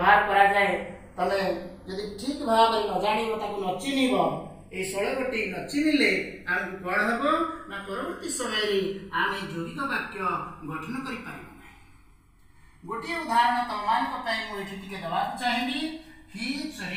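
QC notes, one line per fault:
Throughout, channels drifting apart. The left and right sides appear to run on separate clocks that disagree by something like 70 parts per million. The gap between them keeps creeping, reaching about a millisecond by the end. Summed to mono, that shifting delay carves a comb of notches into the spectrum. As the delay grows, the notches glide steadily downward in frequency. The result is a slow, hollow flanging sweep across the whole sound.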